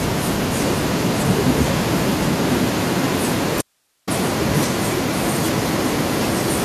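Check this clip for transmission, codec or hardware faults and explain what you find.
Two faults are present in this speech clip.

From 0.55 s to the end, an echo leak: the far end's echo canceller likely failed to remove what its microphone picked up from a loudspeaker, so a copy returns. A delayed copy of the voice trails the speech by about 1.02 s, only a few decibels quieter.

From 3.61 s to 4.07 s, an audio dropout to a faint residue: the signal was likely lost for 460 ms while the path stayed open. The sound cuts off abruptly, leaving only hiss around 45 dB below normal level.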